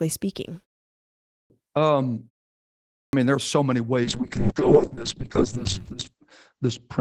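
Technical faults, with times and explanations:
1.19–1.50 s and 2.79–3.13 s, clipped start after a pause: the output device slept through pauses of about 0.6 s and was slow to wake, swallowing roughly 310 ms and 340 ms of each onset, so the speech bursts in abruptly without its opening sounds.
4.06 s to the end, call bitrate drop: a falling bandwidth estimate starved the encoder of bits, coding coarsely and cutting the top from 20 kHz down to 8 kHz. The speech turns muffled and rough, worst for about 1.9 s, which fits a fall toward 7 kbps.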